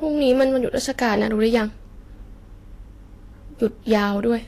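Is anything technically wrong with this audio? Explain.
Yes. There are two problems. The whole clip carries Vorbis compression artefacts, and three stretches of hard clipping sit on top of them.

Throughout, the speech sounds hissy and grainy. Nothing comes through above 14.2 kHz. The remaining treble has a rough, noisy texture, and consonant onsets are smeared. The likely cause is low-quality Vorbis encoding. The encoder lowered its cut-off and quantised the upper residue so coarsely that fine detail turned into noise. The damage fits a bitrate of around 34 kbps.

Hard clipping occurs at 0.28 to 0.44 s, 1.03 to 1.58 s and 3.64 to 4.03 s. The signal was driven about 4 dB, 3 dB and 4 dB past full scale in those spans. The peaks were cut flat. That flattening adds harmonics high up the spectrum. Each span is heard as crackle on the peaks of the speech.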